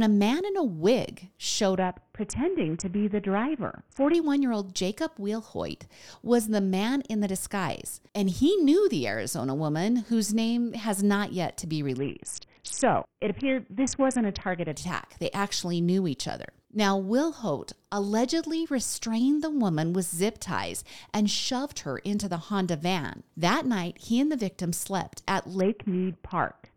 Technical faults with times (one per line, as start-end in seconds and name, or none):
1.77-4.14 Bluetooth SBC bit pool drop
11.98-14.72 Bluetooth SBC bit pool drop
25.61-26.77 Bluetooth SBC bit pool drop